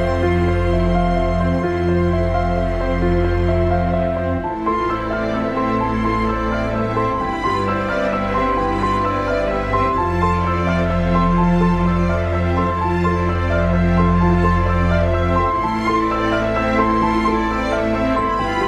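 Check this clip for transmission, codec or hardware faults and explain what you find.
Nothing faulty can be heard anywhere in this recording.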